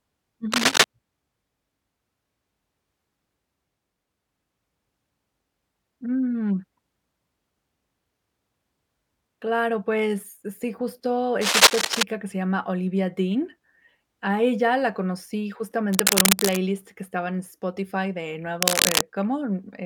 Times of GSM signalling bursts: none

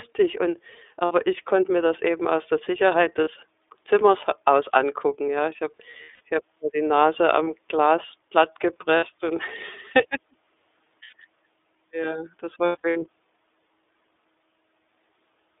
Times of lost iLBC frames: 1.05-1.12, 3.24-3.27, 5.91-6.21, 7.44-7.47, 8.97-9.04, 11.03-11.14, 12.66-13.03

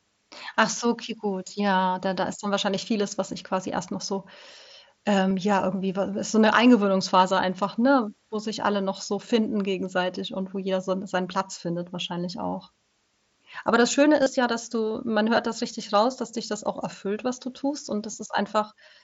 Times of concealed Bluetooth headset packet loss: 5.30, 11.39, 14.22-14.26, 18.12

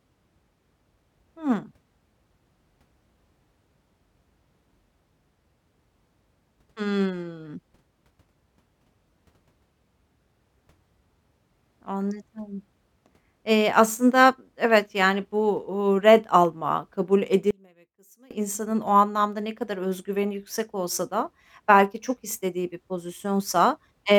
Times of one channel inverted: 17.51-18.31

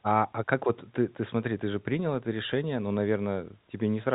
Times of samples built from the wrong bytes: none

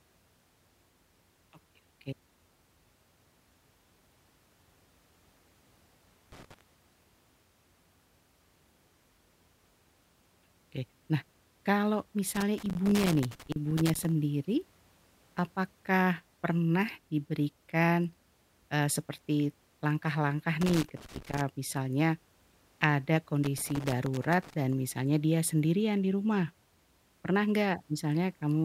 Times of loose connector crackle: 6.32-6.61, 12.35-14.12, 20.61-21.41, 23.44-24.54

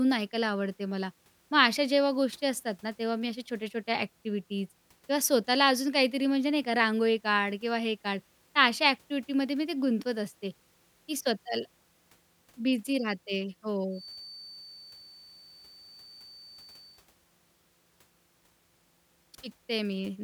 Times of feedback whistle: 13.89-17.05

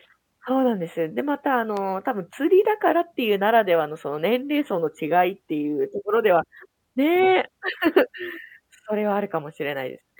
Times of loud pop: 1.77-1.79

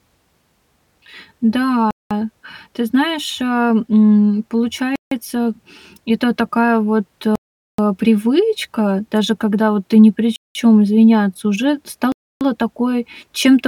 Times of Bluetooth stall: 1.91-2.11, 4.96-5.11, 7.35-7.78, 10.36-10.55, 12.12-12.41

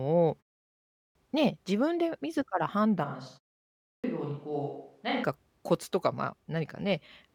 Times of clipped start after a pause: 0.71-1.15, 3.62-4.04

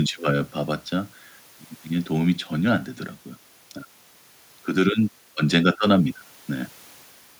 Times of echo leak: none

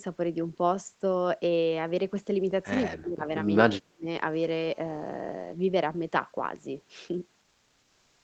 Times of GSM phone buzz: 4.33-5.53

